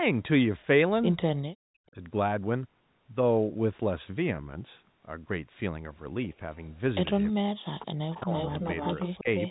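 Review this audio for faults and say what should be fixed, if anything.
Speech suppressed in double talk occurs three times: 1.56 to 1.98 s, 7.32 to 8.34 s, and 9.22 to 9.27 s. In the first two, the speech sinks by around 40 dB. The last is a brief dip of around 10 dB. The likely cause is the echo canceller. Both ends talked at once. It could not tell the local talker from the loudspeaker echo, so it turned everything down.

An echo leak appears twice. A faint scrap at 7.13 to 7.23 s sits around 30 dB below the speech. A longer stretch runs from 8.12 s to the end and is much louder, only around 10 dB below. Both copies trail the original by about 340 ms. That steady delay likely points to the far end's loudspeaker sound reaching its microphone and getting past its echo canceller. The stray sound was then sent back down the line. The returning copy is band-limited like the rest of the call, with nothing above about 3.9 kHz from the telephone coding.

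To prevent both, use a headset at the far end, or tune the echo canceller to converge faster and handle double talk without heavy suppression.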